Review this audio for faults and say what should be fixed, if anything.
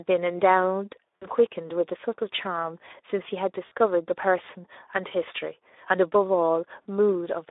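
Speex codec, throughout: low-bitrate CELP coding leaves too few bits for the excitation, so speech sounds hoarse and noisy within a 300 Hz to 3.7 kHz line band, consistent with an 11 kbps setting.

VoIP packet loss concealed by the speech codec, at 1.16 to 1.27 s, 3.65 to 3.72 s and 6.88 s: the decoder extrapolated its last pitch and filter across gaps of about 60, 60 and 40 ms, stretching the sound into a fading buzzy tone or coloured noise.

To fix it, raise the Speex quality or move to a wideband codec, and add jitter buffering or forward error correction so lost frames are recovered rather than concealed.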